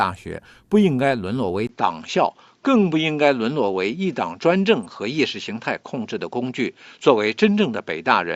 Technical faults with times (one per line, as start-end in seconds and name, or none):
1.67-8.36 input switched to a poorer device